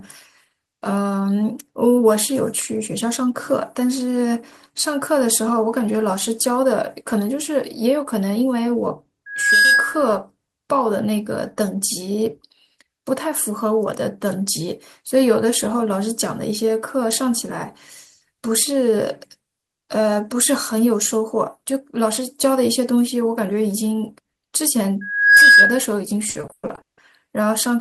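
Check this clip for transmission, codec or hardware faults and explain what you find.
Two kinds of fault are present: loudspeaker feedback squeal twice, and a burst of repeated packet loss near the end.

Loudspeaker feedback squeal at 9.26–10.09 s and 25.01–25.85 s: the microphone is picking up its own loudspeaker, and at 1.6 kHz the loop gain passes one. A pure tone swells within a fraction of a second to sit roughly 10 dB, then 15 dB, above the speech.

Repeated packet loss (robotic sound) at 26.29–26.99 s: packets keep going missing, and each gap, the longest 160 ms, is patched by extending the preceding sound. About 420 ms of the 700 ms stretch is filler, so the speech turns choppy and robotic.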